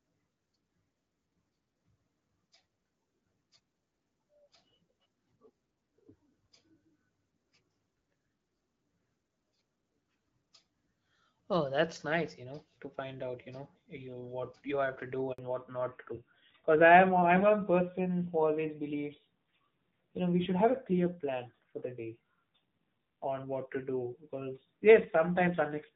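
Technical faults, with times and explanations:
15.32 to 15.38 s, handover gap: Right after "you have to do", the sound fades out within a few tens of milliseconds and leaves 60 ms of silence. The call was being switched from one network to another, and no speech frames arrived until the new link came up, so whatever fell in that window is gone. On the waveform this shows as a brief flat stretch at zero. On the spectrogram it is a clean vertical gap across every frequency.
15.38 s to the end, fallback to narrowband: Straight after the gap, also following "you have to do", the audio loses everything above 4 kHz. The call dropped out of HD Voice into an older narrowband codec, and the duller, rougher tone points to roughly 7.4 kbit/s AMR-NB. Before this point the light wideband coding reached about 7 kHz. On a spectrogram the upper band is cut off abruptly at the gap, leaving a hard ceiling at 4 kHz for the rest of the clip.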